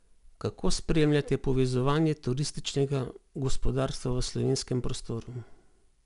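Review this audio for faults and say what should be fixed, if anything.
4-bit ADPCM compression runs throughout the speech, from start to end, and is plainly audible. Each sample is coded as a 4-bit step from a predicted value, so the coding error follows the signal as a gritty hiss that swells on loud syllables, and sharp onsets distort where the adaptive step size cannot grow fast enough. Nothing is heard above 10.6 kHz, which fits a sample rate near 22 kHz and a data rate of about 88 kbps. Keeping the audio as linear PCM at a full sample rate, or using a modern codec, would prevent this.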